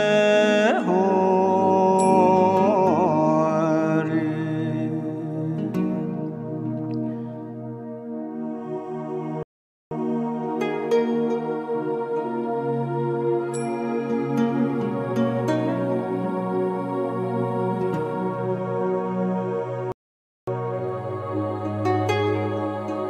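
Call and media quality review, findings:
Rebuffering stall, twice: silence 9.43–9.91 s (0.48 s added) and 19.92–20.47 s (0.55 s added). Player buffer underrun; playback halts until data arrives. Unlike a dropout or packet loss, the audio resumes exactly where it stopped: nothing skipped, only time inserted.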